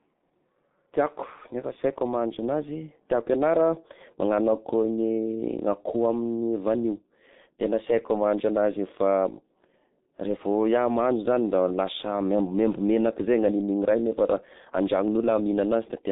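Throughout, heavy G.723.1 codec damage fits a 6.3 kbit/s stream: spectrogram empty above 3.8 kHz, 30 ms frame updates leave speech muffled, hoarse, consonants blurred.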